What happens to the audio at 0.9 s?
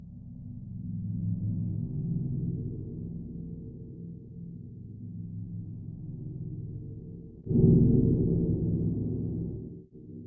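Nothing goes wrong at 0.9 s; the sound plays through that moment intact, with no dropout, click or distortion.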